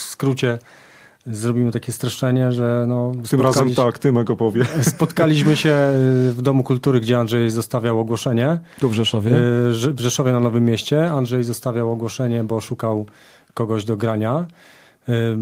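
No technical faults are audible.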